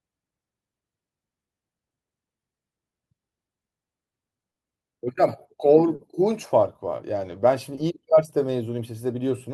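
Short concealed packet loss strikes four times, at 4.51, 5.95, 6.97 and 7.75 s, where 40, 40, 20 and 20 ms of speech arrived too late to decode. The receiver papered over each gap by extending the preceding sound, then blended back, leaving a brief smear.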